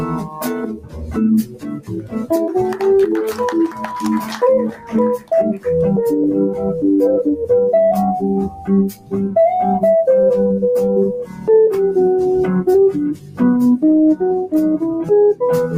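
A noise suppressor applied to music or sounds stays active throughout. It mistakes sustained content for noise and swings the level by roughly 10 dB, so the audio pumps and thins. Sound cut by the noise suppressor falls at 0.03 to 2.31 s (about 15 dB down), then at 3.68 to 3.88, 4.22 to 5.66, 8.49 to 9.14, 11.24 to 11.49, 13.14 to 13.41 and 14.95 to 15.10 s. In those spans, held sound sinks by about 8 to 14 dB.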